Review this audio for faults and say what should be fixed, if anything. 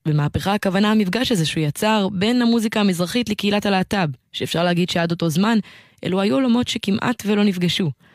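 No faults; nothing needs fixing.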